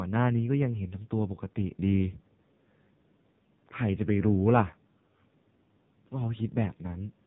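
From start to finish the speech carries AMR narrowband mobile codec damage, and it is heavy. Nothing passes above 4 kHz, so sibilants and consonant edges are dulled. The codec rebuilds each 20 ms frame from a vocal-tract model driven by a few sparse pulses, and here that rebuild is coarse. The result is a buzzy, synthetic quality, which fits a low bitrate near 5.9 kbps. The call microphone processing trims the lowest bass, as expected.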